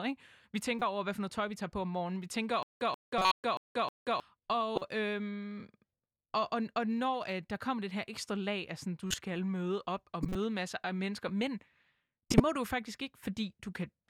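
At 0.79 s there's a corrupt frame decoded, a quick glitch as damaged data from a few frames got played anyway. From 2.63 to 4.2 s comes a stutter with silent gaps: a 133 ms fragment repeats five times, every 314 ms, with 182 ms of dead silence between, likely a stalled stream. Further corrupt-frame glitches land at 3.18, 4.75, 9.07, 10.23 and 12.3 s, the loudest being the last one.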